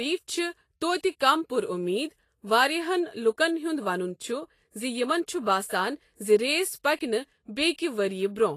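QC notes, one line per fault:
Throughout: Vorbis compression. The speech has a hissy, grainy treble, with sibilants smeared into noisy patches, blurred consonant onsets, and nothing above 14.2 kHz. The likely cause is a low-rate lossy encode, which fits about 32 kbps, where the high band is coded so coarsely that its detail becomes noise of similar energy. A spectrogram shows a hard ceiling at 14.2 kHz and speckled, blotchy texture beneath it.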